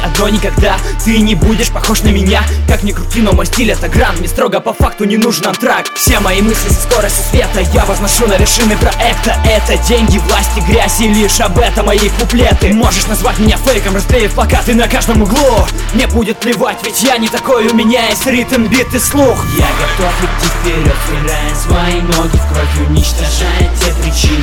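Nothing technically wrong can be heard anywhere in the audio.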